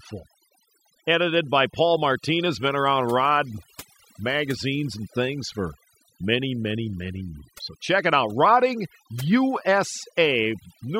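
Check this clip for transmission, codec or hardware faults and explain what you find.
One processing fault runs through the whole speech clip: overdone noise removal. A noise reduction stage set too aggressively pushes individual frequency bands down or out whenever they sit close to its noise estimate, taking the softer parts of the voice along with them. The background drops and breaks up into twinkling specks.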